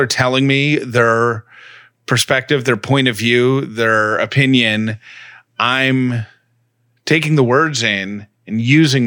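No technical faults can be heard anywhere in the speech recording.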